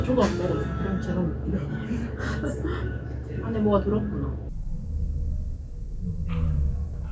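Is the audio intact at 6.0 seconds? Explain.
No. From 4.49 s to the end, a wrong sample rate slows everything to 0.363 times normal speed and drops the pitch about 17.6 semitones, consistent with 44.1 kHz audio played at 16 kHz. On a spectrogram, energy sinks low and stretches sideways; waveform features look drawn out.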